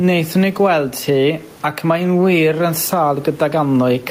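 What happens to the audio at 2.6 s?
At 2.6 s the gain swings by around 10 dB as each loud syllable hits, squashing the speech and bringing loud and soft parts closer in level. This gain pumping runs throughout the clip, likely from gain set far too high with a fast limiter repeatedly clamping it.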